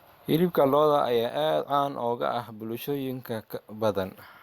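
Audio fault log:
No faults heard.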